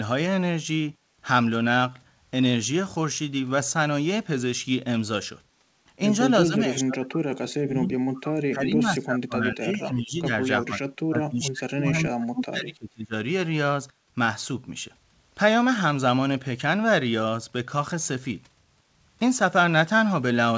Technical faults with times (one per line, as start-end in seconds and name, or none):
6.45-10.33 speech suppressed in double talk
10.61-13.14 speech suppressed in double talk